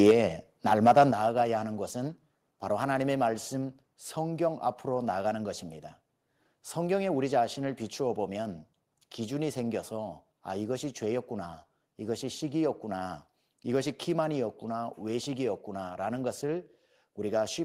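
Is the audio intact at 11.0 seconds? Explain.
Yes, the speech at 11.0 seconds is intact, with no dropout, glitch or other fault at that moment.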